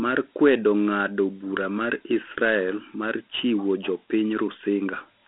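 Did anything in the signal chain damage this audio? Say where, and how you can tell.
Yes: Dialogic VOX ADPCM at the codec stage, throughout. Coarse 4-bit step coding, consistent with 32 kbps, leaves gritty hiss trailing the speech, with nothing above 3.8 kHz.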